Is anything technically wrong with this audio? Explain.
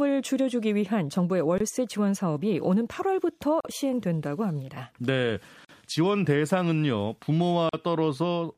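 Yes. Gaps at a join of encoded pieces: silences at 1.58–1.60 s (23 ms), then 3.60–3.65, 5.65–5.69 and 7.69–7.73 s (43 ms each). They recur every 2.0 s, as separately encoded segments join with untrimmed encoder delay and padding. The speech drops out abruptly, then resumes where it stopped.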